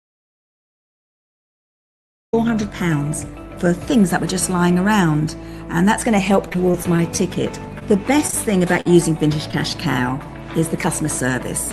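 The clip opens in an audio dropout to silence lasting until 2.33 s. It is silence with no room tone, likely from lost input while recording continued.

From 6.49 to 7.20 s comes repeated packet loss with a robotic sound. Seven short holes, the longest about 22 ms, are patched by extending prior sound. The result is choppy, with pieces missing.

Short concealed packet loss follows at 7.79 s, at 8.27 to 8.35 s as two back-to-back losses, and at 9.51 s. Each gap is a brief smear or wobble where about 20 ms went missing.

At 8.81 to 8.87 s there is a short stall from a late packet. The sound is held for about 47 ms, with a slight buzz or dip, before resuming intact.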